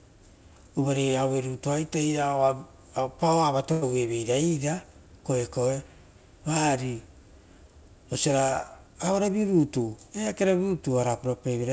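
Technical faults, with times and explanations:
3.72–3.84 s, short stall from a late packet: a packet arrived late and the jitter buffer ran dry, so the receiver held the last sound for about 100 ms until it came, then carried on from the same point. Nothing is lost, but one sound lingers too long with a faint buzz or a slight dip. On a spectrogram the harmonics run flat and unchanging across that stretch, and the waveform shows repeated, near-identical cycles.
9.12–10.49 s, jitter buffer speed-up: the buffer had built up more audio than its target, and to bring the delay back down the receiver cut out short pieces a pitch period or so long, again and again. Roughly a tenth of a second goes missing over this stretch, so the speech runs at about 108% speed while its pitch stays put, and it sounds slightly hurried. A spectrogram shows syllables packed closer together with unchanged harmonic spacing, and the waveform has small joins where cycles were dropped.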